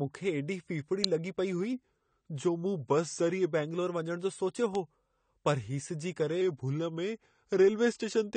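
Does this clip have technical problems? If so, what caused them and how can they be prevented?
Yes. Throughout the speech the top end stops at 9 kHz and plainly audible smearing and warble remain, likely from AAC compression (AAC-LC), which fits a low bitrate around 32 kbps. Encoding at a higher bitrate, or keeping an uncompressed master, prevents this.

Sharp snaps at 1.04 s and 4.75 s sound like an electrical switching spike, likely a nearby switch or static discharge picked up by the audio line. Shielded, well-grounded cabling and separating audio runs from switched loads prevent it.

From 1.73 to 3.52 s and from 6.41 s to the end, speed drops 6.16% and pitch falls 110 cents, about a semitone. This is likely a drift correction step, where clock-matching software changed the playback rate in one jump. Locking devices to a common clock, or using gentle sub-percent rate correction, prevents it.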